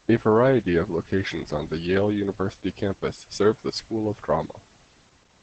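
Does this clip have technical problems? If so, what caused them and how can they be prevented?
Yes. The speech carries Opus voice compression from start to finish, and the damage is plainly audible. Nothing sounds above about 8.6 kHz, so the top of the band is gone and the voice sounds dull. The coder works in its SILK mode, modelling the voice with linear prediction and coding the excitation coarsely. That leaves a muffled, slightly hoarse and robotic tone. It fits a low rate of about 12 kbps. To prevent it, encode at a higher Opus bitrate so the full band and finer detail survive.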